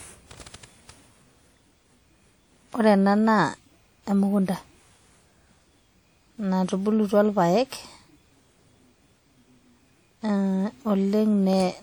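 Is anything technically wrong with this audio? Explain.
Yes. WMA compression runs throughout the speech, likely from a transform codec at a bitrate around 48 kbps. Long coding blocks smear quantisation noise over tens of milliseconds, giving plainly audible ringing, washy smearing and hiss that breathes with the signal.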